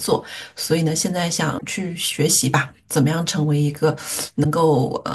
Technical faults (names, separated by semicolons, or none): damaged data in a compressed stream